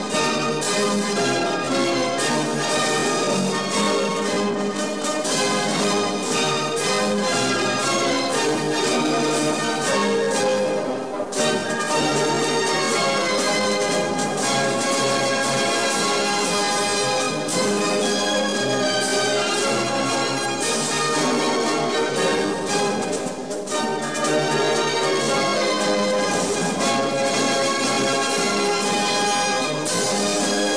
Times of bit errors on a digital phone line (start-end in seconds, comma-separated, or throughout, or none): none